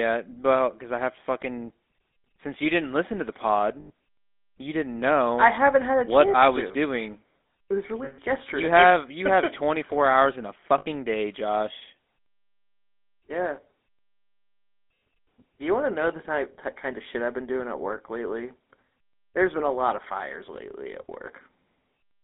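GSM full-rate codec damage runs through the whole of this speech clip: the band is held between 250 Hz and 3.6 kHz, and the pulse-driven vocal-tract model adds a buzzy, gravelly roughness that fits a 13 kbps GSM full-rate encoding. Lost GSM frames occur at 3.80–3.91 s, just after "didn't listen to the", at 8.04–8.19 s, and at 10.78–10.87 s after "hours in a". In each gap of about 80 to 140 ms, the last good frame is repeated, leaving a rough, metallic ring.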